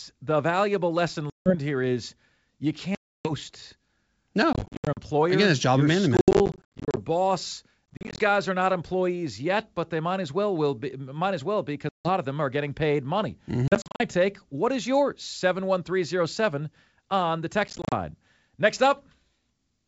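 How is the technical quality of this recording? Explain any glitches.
The recording has repeated dropouts from packet loss on an ADPCM call, over the G.722 wideband link, which at what sounds like its full 64 kbit/s rate adds only faint coding damage.

Dropouts fall at 1.30, 2.95, 4.53, 6.17, 7.93, 11.89, 13.68 and 17.68 s. Those at 1.30, 2.95 and 11.89 s are solid holes of 160, 300 and 160 ms. The rest are scattered gaps, each run no longer than 70 ms, spread over up to 800 ms at 6.17 s. Lost packets become silence with hard edges. The decoder's predictor and step size then drift from the sender's. So the speech comes back slightly distorted before settling.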